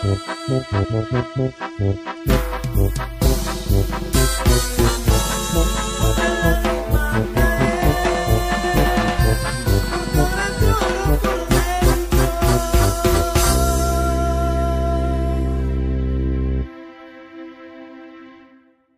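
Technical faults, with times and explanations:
0.83–0.85 s, 6.16 s, 8.03 s: compressed frames skipped. At each spot the audio hops forward because whole compressed frames never got played, either missing from the stream or rejected by the decoder as damaged. The first jump loses around 50 ms, which fits a couple of frames; the later two lose about 20 ms each, about one frame.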